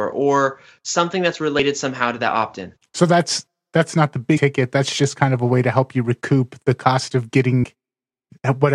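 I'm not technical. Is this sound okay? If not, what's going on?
No. The speech jumps ahead three times: at 1.59 s after "or something that's", at 4.36 to 4.38 s after "that's that's not the" (the biggest gap), and at 7.63 s after "recoup the cost of". These are compressed frames skipped: small chunks of the file were missing or damaged, so the player dropped them.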